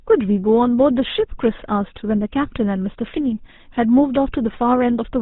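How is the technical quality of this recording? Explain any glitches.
Quality is limited by GSM full-rate codec damage, plainly audible across the whole clip. The speech sounds buzzy and gravelly, with a rough, grainy edge on voiced sounds and a dull, boxed-in tone because nothing above 4 kHz survives. The codec rebuilds the voice from a vocal-tract model excited by regularly spaced pulses, keeping only every third excitation sample. That coarse excitation produces the roughness, and the character fits the 13 kbps rate of that early phone codec.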